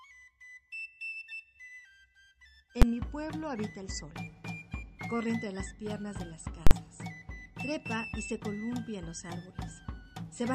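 Invalid numbers at full scale occur twice: a calculation produced infinite or invalid values that were pinned to the maximum output. At 2.82 s this gives a single sharp bang, which fits a 512-sample block. From 6.67 to 6.71 s, consistent with a 2048-sample block, a loud pop at each edge encloses silence.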